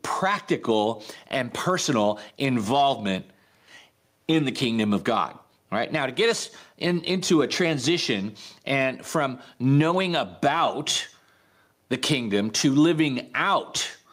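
Gain pumping runs through the whole speech recording: the level swings by around 10 dB, ducking under each loud syllable. The likely cause is input gain set far too high, with a fast limiter clamping down.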